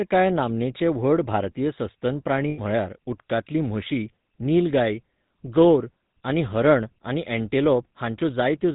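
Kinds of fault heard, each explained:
GSM full-rate codec: a vocal-tract model driven by sparse regular pulses, audible throughout as buzzy, gravelly speech with nothing above 4 kHz.
Lost GSM frames: around 80 ms missing after "व्हड भारतीय सस्तन प्राणी", filled by repeating the last good frame, heard as a brief metallic ring.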